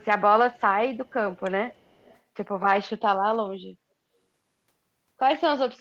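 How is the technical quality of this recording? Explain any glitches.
The recording has an echo leak in its first 2.2 seconds. Faint, delayed copies of the speech trail it by about 280 ms, at 0.01–0.05, 0.54–0.61, 0.97–1.13, 1.32–1.4 and 1.69–2.19 s. The first three are the weakest, about 40 dB down. The last two are stronger, about 25 and 30 dB down. The likely cause is a far-end loudspeaker whose echo canceller let some of its microphone pickup return down the line.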